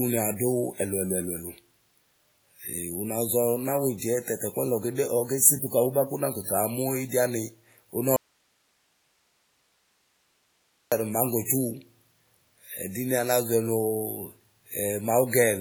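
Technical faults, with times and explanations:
Throughout: WMA compression. The speech has a ringing, washy quality, with a hiss that rises and falls with the signal and seems to trail each syllable over tens of milliseconds. That points to a transform codec using long blocks and a simple encoder, likely Windows Media Audio at a low bitrate around 32 kbps. Faint components have been dropped rather than kept, which thins the texture. Band-limiting is not what gives it away, since content reaches about 20.1 kHz. The smeared, breathing noise is what separates it from plain broadband hiss.
3.98 to 4.02 s and 11.45 to 11.49 s: pre-echo. Just before two sharp onsets, a brief hiss comes in ahead of the attack, spanning 44 ms the first time and 38 ms the second. The attack itself sounds softened. The codec spread the noise budget meant for the loud onset across its whole block, so the quiet moment leading into it was filled as well. 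Unlike a click or a dropout edge, the hiss comes before the event.
8.16 to 10.92 s: audio dropout to a faint residue. The speech cuts off abruptly mid-flow and returns just as suddenly about 2.75 s later. In between is only low hiss, roughly 45 dB below the normal level. The wanted signal was most likely lost upstream while the rest of the chain stayed live and kept passing its own noise. The hard edges and the steady hiss floor set it apart from a natural pause or a fade.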